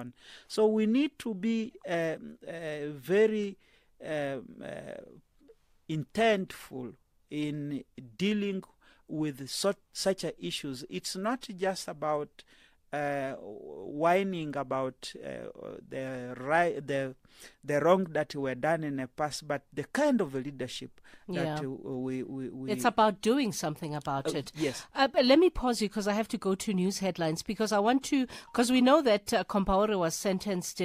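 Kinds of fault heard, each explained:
No kinds of fault are heard in this speech recording.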